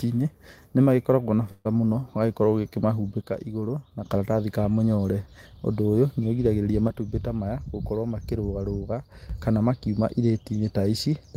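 Right after "nĩ magĩkoragwo na", from 1.51 to 1.67 s, there's a burst of packet loss: the receiver stretches the last bit of sound for about 135 ms, fading it, then jumps ahead past roughly 140 ms of audio to "mũno ũgagĩkorwo". Then come two sudden gain jumps, each dropping speech and background together by about 6 dB with no ramp. The first runs 3.22 to 4.06 s, ending just before "karatathi ka mũnyore", and the second runs 6.88 to 9.30 s, starting after "ũyũ nĩ ũrigagĩrĩria". The likely cause is a digital gain step applied instantly.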